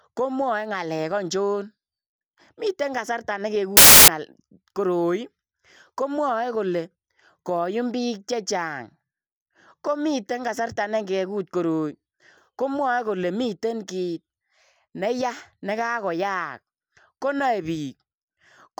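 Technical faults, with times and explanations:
3.77–4.08 s, samples built from the wrong bytes: after "miten kasartaa", misassembled bytes turn low bits into loud broadband noise, a dense waveform block and a flat spectrogram smear.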